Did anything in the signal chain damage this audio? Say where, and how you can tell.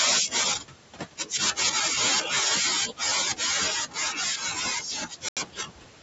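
Yes. In the call processing stage, noise suppressor artifacts run through the whole clip. The room noise, about 13 dB below the speech, pumps down in gaps and swells back under speech, as the suppressor gates bands frame by frame.

The same suppressor also cut speech. It misjudged speech as noise and turned it down with the background. This happens from 0.56 to 1.75 s, by up to about 19 dB, and briefly from 2.22 to 2.34 s, by about 7 dB. It happens again from 2.86 s to the end, by up to about 19 dB. Those stretches sound faint and swallowed.

At playback, the sound drops to silence for 82 ms, from 5.29 to 5.37 s, then resumes. This is likely a Bluetooth stall. Interference delayed packets, the headphone buffer emptied, and output halted until the retransmitted audio arrived.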